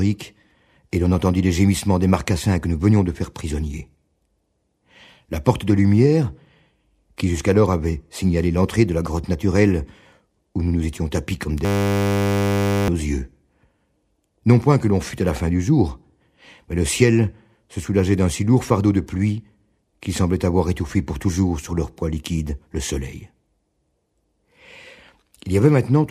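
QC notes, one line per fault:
11.65–12.88 s, system hang loop: a single 10 ms slice repeats continuously, giving a steady 100 Hz buzz while the system stalls; roughly one and a half seconds of audio lost.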